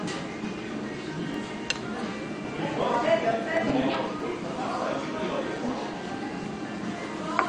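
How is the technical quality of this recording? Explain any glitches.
The quality is poor. The audio is dull and smeared throughout, and it carries a steady train of ticks plus two separate skips.

Throughout, sustained sound warbles and fizzes. This is likely AAC compression, AAC-LC at a low rate that fits 32 kbps. The encoder lowers its cut-off and starves bands of bits, so the damage is plainly audible.

From 0.07 s to 7.31 s there are periodic USB or driver dropouts. They come every 0.125 s, about fifty in all. Each time a background task stalls the audio path, and roughly 2 ms is replaced by silence. The result is a regular ticking under the signal.

At 1.34 s and 4.20 s there are single small jumps in the sound. Each is likely a dropped buffer (overrun), where samples were overwritten before being read. About a millisecond or two is lost at 1.34 s and a few milliseconds at 4.20 s. 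The sides join with no gap.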